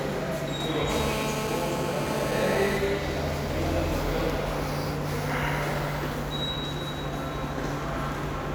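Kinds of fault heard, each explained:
GSM phone buzz: from 0.90 to 2.77 s, a steady, raspy, harmonic-rich 217 Hz buzz, about 4 dB below the sound. A nearby 2G phone in a call transmits in 217-per-second bursts, which the audio circuitry rectifies into this tone, regardless of the sound.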